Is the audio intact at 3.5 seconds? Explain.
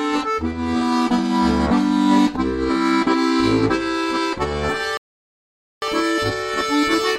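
Yes, at 3.5 seconds the audio plays through cleanly, with no dropout, click, distortion or other fault at that point.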